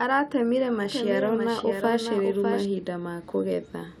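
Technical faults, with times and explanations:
0.85–2.65 s, doubled audio track: a dry copy about 5 dB quieter lags roughly 0.7 s, likely via a slower capture path. The spectrogram shows repeated full-band patterns with abrupt edges.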